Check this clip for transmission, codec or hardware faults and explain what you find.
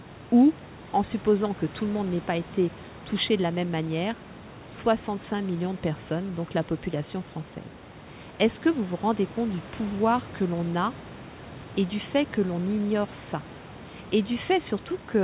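Nothing here sounds wrong, just the usual narrow phone-line character of speech sent over a G.711 call with nothing above 4 kHz, plus a bit of room noise sitting about 20 dB below the talking.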